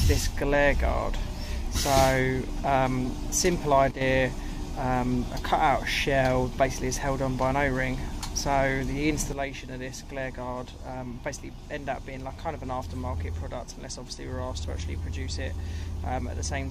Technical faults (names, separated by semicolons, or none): sudden gain jump